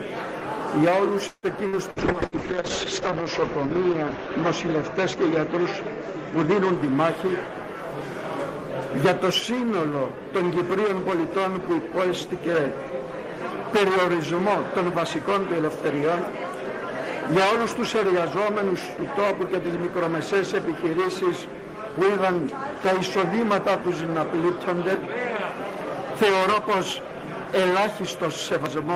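From 1.27 to 2.35 s there is repeated packet loss, heard as robotic sound. The stream breaks up four times in quick succession. Each hole is filled by stretching the last good sound forward. About 30 percent of this span is patched that way, and the longest gap lasts 155 ms. Some audio is simply lost. The result is choppy, with pieces missing.

A call bitrate drop begins at 1.97 s and lasts until 6.83 s, overlapping the end of the loss. The sound gets coarser and loses its top end. The audible bandwidth shrinks from 20 kHz to about 8 kHz. That fits an encoder pushed from roughly 32 kbps down to around 7 kbps. The worst stretch lasts about 1.02 s. During it the audio turns rough, watery or muffled. Then quality climbs back.

Two jitter buffer speed-ups follow. The first runs from 11.71 to 12.54 s, and the second from 14.80 to 15.67 s. In each, the receiver held more audio than it wanted. 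To cut the delay, it trimmed tiny pitch-period slices many times over. The first stretch plays about 6 percent fast, shedding roughly 50 ms. The second plays about 4 percent fast, shedding roughly 40 ms. Pitch stays put, and the first stretch sounds hurried.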